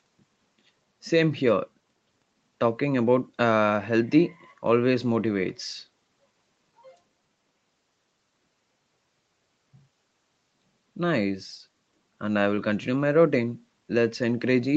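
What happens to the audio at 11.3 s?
At 11.3 s the speech carries on intact, with no dropout, glitch or other fault, only the steady 8 kHz band limit of the call path.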